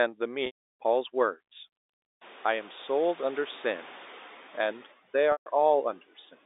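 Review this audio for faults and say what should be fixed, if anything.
Packet loss with pitch repetition occurs at 0.46 to 0.68 s and 5.32 to 5.46 s, where 300 ms and 140 ms of audio went missing. The receiver repeats the last pitch period and fades it, so the gap fades into silence and the speech returns with a short cross-fade. On the waveform this shows as identical repeating cycles, and on a spectrogram as flat harmonic stripes that taper away. Forward error correction or a more reliable network link would prevent it.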